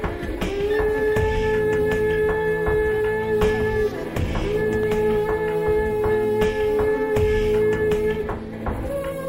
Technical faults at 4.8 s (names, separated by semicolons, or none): loud pop